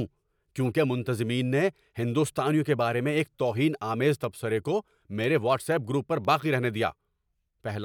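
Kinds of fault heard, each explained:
Periodic USB or driver dropouts: Once a second, from 0.24 s to 7.25 s, a sub-millisecond sliver of speech drops to silence, giving about seven evenly spaced ticks.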